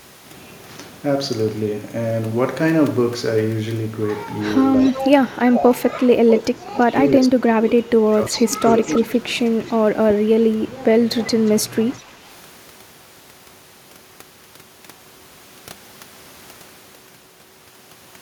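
From 4.80 to 5.08 s, a delayed copy of the speech trails about 0.34 s behind, roughly 10 dB down. This is an echo leak, likely from a loudspeaker on the other end whose echo canceller let part of its microphone pickup travel back.

Beginning at 4.91 s and running to 9.65 s, the speech repeatedly dips, by up to about 20 dB and for around three seconds in all. This is speech suppressed in double talk, likely an echo canceller turning the talker down while both sides spoke at once.

Inside and just after that stretch the echo returns, still about 0.35 s late. At 8.26 to 8.31 s it is a barely audible scrap. At 8.70 to 9.11 s it is nearly as loud as the speech itself. At 9.66 to 9.73 s it is again only a faint fragment. A final brief dip at 10.22 to 10.57 s comes from the same suppression.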